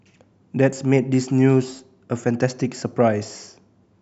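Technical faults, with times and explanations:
No technical faults detected.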